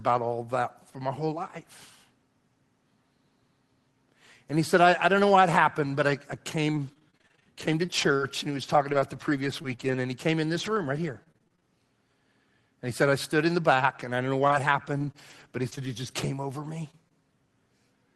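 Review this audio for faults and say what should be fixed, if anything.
Between 6.71 and 11.64 s there is repeated packet loss with a robotic sound. About twenty holes, none longer than 25 ms and totalling roughly 420 ms, are each filled by extending the previous speech. This stretch sounds choppy. A deeper adaptive jitter buffer and a more stable network route would prevent it.

From 14.42 to 16.25 s there are scattered short gaps, about five, each around 20 ms or less and adding up to about 100 ms. Each is patched by continuing the preceding sound, so it comes through as a brief tick or smear. Reducing packet loss and jitter on the link would prevent these.

At 16.63 s a lost packet is rebuilt from error correction. A low-rate redundant copy carried in the following packet replaces the missing 20 ms frame, which leaves a rougher, noisier moment rather than a gap. A higher Opus bitrate, so the redundant copy carries more detail, would prevent this.

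There is short concealed packet loss at 16.91 s and again at 17.09 s, each about 20 ms. No redundant copy was available, so the decoder extrapolated from the last pitch or noise shape and crossfaded back, leaving a brief smear or wobble. Raising the loss-percentage setting for in-band forward error correction would prevent it.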